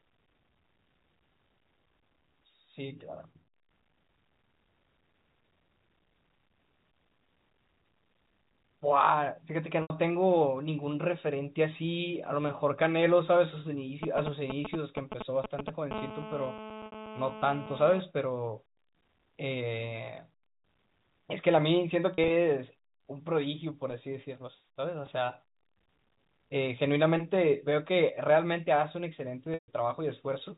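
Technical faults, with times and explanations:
9.82 to 9.90 s, 16.86 to 16.92 s, 22.14 to 22.30 s and 29.54 to 29.68 s: packet loss with pitch repetition. Gaps of 80, 60, 80 (scattered, runs up to 40 ms) and 140 ms are bridged by looping the last pitch cycle, giving a brief buzzy held tone; the 140 ms gap fades toward silence. On a spectrogram the harmonics freeze into flat lines, and the waveform shows identical repeated cycles.
14.03 to 15.93 s: GSM signalling bursts. A nearby 2G phone's signalling bursts are rectified in the audio path, producing a galloping ticking buzz at 217 Hz, about 5 dB below the speech. A spectrogram shows regular vertical stripes with harmonics stacked at 217 Hz multiples, and the waveform shows clustered spiky pulses.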